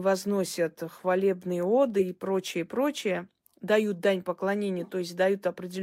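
A corrupt frame was decoded at 1.99 to 2.02 s: flipped bits in a single compressed frame were played anyway, placing energy at wrong frequencies. The speech gets a brief chirp, squeak, blip or burst of noise peaking around -15 dBFS, just before "и прочее прочее дают".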